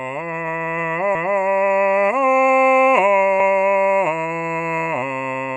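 Music with overlapping chunks: 250 ms of audio plays twice at 1.15–1.40 s and 3.40–3.65 s, as 2 s chunks begin before the previous one ends. This is heard as a stutter, and the waveform and spectrogram show each repeated patch duplicated side by side.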